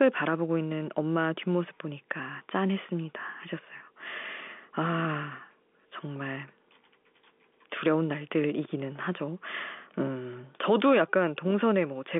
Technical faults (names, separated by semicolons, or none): none